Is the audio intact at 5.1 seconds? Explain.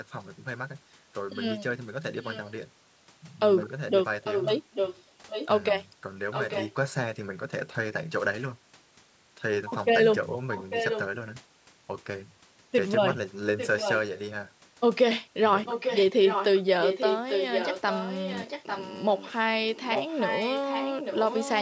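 No. An echo leak runs from 4.24 to 5.48 s, so 5.1 s falls inside it. A delayed copy of the speech, trailing the original by about 0.85 s and only a little quieter than it, sits on top of the live talking. This is likely the far end playing the call through a loudspeaker, with its echo canceller failing to strip the pickup before sending it back down the line.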